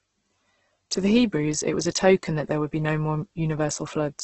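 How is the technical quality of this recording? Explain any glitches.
The quality is poor: the speech carries heavy compression damage from start to finish. It sounds like Opus compression, likely at a very low rate, which fits something around 12 kbps in the music-style CELT mode. With so few bits, the encoder keeps each band's overall energy but fills in the detail with folded or noise-like content, so the speech comes out rough and grainy rather than swirly. The bandwidth is also cut to wideband, leaving nothing above about 8.2 kHz, which takes the air off the top.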